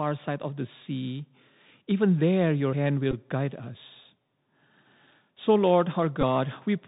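A speech recording carried over a Bluetooth CVSD headset codec, with plainly audible damage throughout. The sound is cut off above 4 kHz, s sounds come through scratchy, loud bright passages distort where the one-bit delta modulation can't track the waveform, and a granular hiss sits under everything, which fits the 64 kbps CVSD link. Bluetooth headset packet repeats occur at 3.11–3.14 s, between "even there your hand" and "guide us", and again at 6.21–6.23 s. Each gives a short buzz near 267 Hz lasting about 15 ms, as the same 3.75 ms packet is decoded repeatedly, which points to four lost packets in a row each time.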